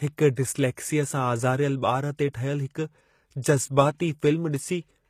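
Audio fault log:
Throughout, HE-AAC compression: the treble is plainly damaged and nothing reaches above 14.9 kHz. The top band is likely rebuilt from copied lower bands, giving gritty, mismatched sibilance, which fits a bitrate near 20 kbps.
0.36 s, pre-echo: a brief hiss of about 17 ms precedes a sharp attack, because the codec's quantisation noise spreads across the whole block into the quiet moment beforehand.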